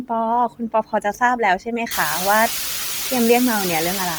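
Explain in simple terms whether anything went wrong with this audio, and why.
Throughout the clip, the speech has a breathy, grainy edge, as if sanded down. The likely cause is Bluetooth LC3 compression: to squeeze the sound through a wireless link, the codec throws away fine detail and fills the gaps with noise, and here it squeezes hard.

Between 0.49 and 1.21 s, parts of the speech dip and sound swallowed or faint, about a third of a second in total. This is speech cut by the noise suppressor: the filter meant to remove background hiss mistook some quieter speech sounds for noise and turned them down.

From 1.91 s to the end, a steady, even hiss sits almost as loud as the speech itself, with no crackle or distortion. This is low bit depth with dither: the sound is stored with only 4 bits, so it has very few loudness steps, and dither spreads the rounding error into constant noise. The room's own background noise, which grows louder around 3 s while staying well under the speech, is part of the recording and not a fault.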